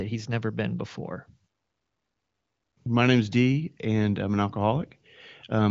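The speech has no technical faults to describe, only the top end stopping near 7.6 kHz, as fits an HD Voice call path.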